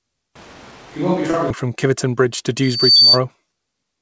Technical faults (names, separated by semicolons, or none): switch to a distant microphone; short concealed packet loss; loudspeaker feedback squeal